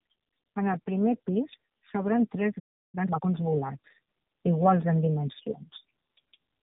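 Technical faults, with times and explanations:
Throughout: tandem speech coding. The speech was coded, decoded and coded again by two low-rate speech codecs in a row. The second one works on the already damaged output of the first. The loss compounds. The result is rough, muffled and warbly, worse than either codec alone. The chain was narrowband: G.729A at 8 kbit/s, then G.711, then AMR-NB at 7.4 kbit/s.
2.59 to 2.95 s: playback stall. The sound stops mid-flow and the output goes silent for about 0.34 s. Nothing plays during the gap. The likely cause is that the player ran out of data or its output thread was blocked. When playback resumes, the audio continues where it stopped.
2.95 to 3.27 s: time-compressed catch-up. Straight after the stall, the player works off its backlog. It cuts out small pieces of audio and cross-fades the remainder together. Here it runs at 2.0 times normal speed for about 0.32 s. 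The pitch stays normal, so the speech sounds hurried rather than squeaky.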